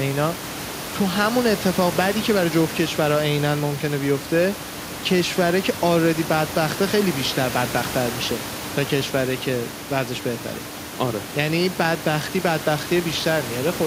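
Nothing goes wrong with the system anywhere in this speech recording, and the only thing under the talking is the ordinary background noise of the room, sitting about 13 dB below the speech.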